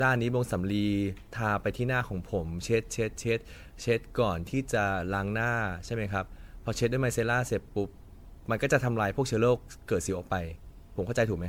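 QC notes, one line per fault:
throughout: generation loss. The speech sounds swirly, hollow and smeared, its attacks blurred and grainier than content reaching 19.9 kHz would suggest. This likely comes from about seven rounds of MP3 encoding, consistent with 96 kbit/s, each pass re-quantising on a shifted frame grid.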